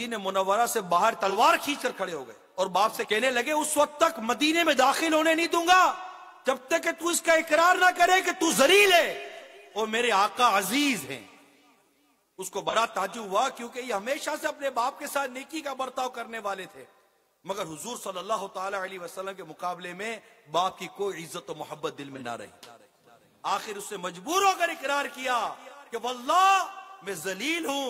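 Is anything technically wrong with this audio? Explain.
Yes. There is AAC frame loss with concealment at four points: 1.29 to 1.36 s, 9.31 to 9.36 s, 12.69 to 12.74 s, and 22.15 to 22.21 s. Each gap is about 43 ms, which fits one lost AAC frame. The decoder had no data there. It patched the hole by reusing the last good spectrum. Each event is heard as a brief smeared, noisy or phasey blip where the sound loses its clean detail.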